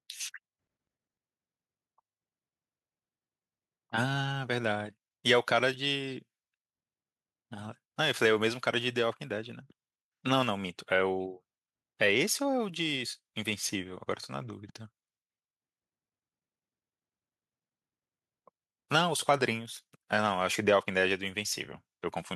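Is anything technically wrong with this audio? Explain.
No, nothing technical stands out here; this is just speech with no faults to point to.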